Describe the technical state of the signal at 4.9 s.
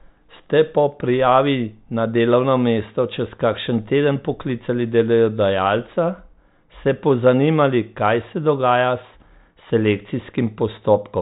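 At 4.9 s the speech is intact, carried over a 40 kbit/s G.726 ADPCM path that passes nothing above about 3.9 kHz and leaves at most faint coding damage.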